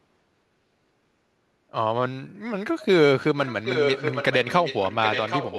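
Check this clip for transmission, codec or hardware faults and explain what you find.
One fault turns up: an echo leak, heard twice. A copy of the speech trailing 773 ms behind flickers at 2.8 s, about 25 dB down, then returns from 3.45 s to the end at about 5 dB below. A loudspeaker-side echo canceller likely failed to suppress its microphone's pickup.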